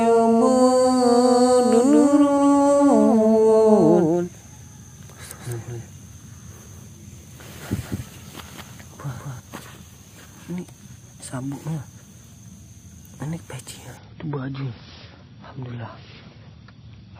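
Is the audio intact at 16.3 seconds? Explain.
No: from 13.97 s to the end, an adaptive stream at a lower bitrate removes everything above 5.8 kHz, fitting a 128-to-24 kbit/s switch, changing suddenly without any gap, unlike a dropout.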